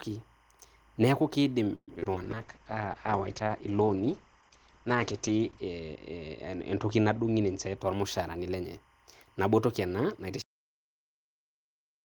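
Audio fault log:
throughout: timecode bleed. A faint, steady chirping warble sits well beneath the speech for the whole clip, flipping between two pitches near 1 kHz and 2 kHz. The pattern repeats at a rate that fits 25-frame-per-second linear timecode leaking in from an adjacent track or cable. That code is a square wave that alternates between the two frequencies according to its bit pattern, and it stays far enough below the speech to register as a background texture.
1.75 to 2.14 s: repeated packet loss (robotic sound). This short stretch turns choppy and robotic, with bits of the speech missing outright. It sounds like a run of lost or late packets, each hole patched by stretching the previous sound before the next one opens. The longest hole is 122 ms, and nearly half of the span is concealed, so the filler dominates long enough to produce that synthetic, robotic edge.
2.23 to 7.83 s: call bitrate drop. 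Here the speech becomes rough, watery and muffled, and the top end disappears. The audio bandwidth shrinks from 20 kHz to about 8 kHz. The sound points to the encoder being pushed down from roughly 32 kbps to around 9 kbps after the call's bandwidth estimate fell. It stays at its worst for about 3.35 s before recovering. With so few bits, Opus codes coarsely and discards the highs.
7.43 to 8.86 s: jitter buffer speed-up. The speech sounds hurried and runs about 8 percent fast, yet the pitch does not rise. This overlaps the end of the bitrate drop. The receiver had built up more buffered audio than it wanted, so it trimmed short pitch-period slices repeatedly to catch up, removing roughly a tenth of a second in total. Because whole cycles are cut, the timing tightens while the pitch stays the same.
10.42 s: cut-off end. The audio stops abruptly in the middle of a sound and drops straight to digital silence, with no decay, and remains silent until the file ends. 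The final buffers were never written or played, so the waveform is simply truncated where the recording stopped and nothing arrived to let it fade. The hard edge from sound to silence makes the ending feel chopped off.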